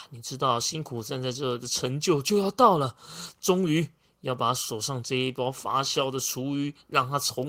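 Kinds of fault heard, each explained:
No kind of fault can be heard in this speech recording. There is nothing here to list or explain.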